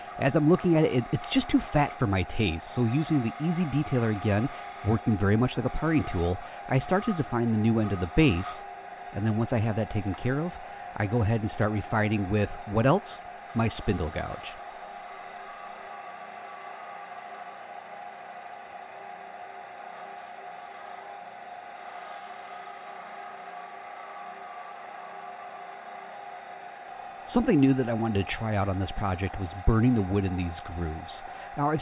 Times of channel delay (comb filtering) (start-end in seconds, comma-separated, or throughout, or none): none